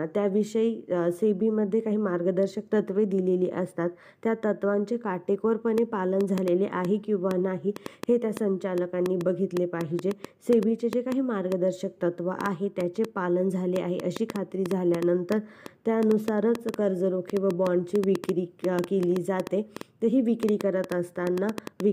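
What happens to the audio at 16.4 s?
At 16.4 s a train of clicks is running, from 5.78 s to 21.81 s, likely interference injecting pulses, heard as irregular ticking, about 4.5 per second, peaking about 15 dB above the sound.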